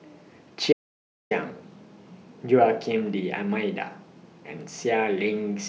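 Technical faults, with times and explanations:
0.73–1.31 s, audio dropout to silence: the speech cuts off abruptly and returns mid-flow after about 0.58 s of silence, with no room tone underneath. The input was likely lost briefly while recording continued writing silence, so that stretch is simply gone.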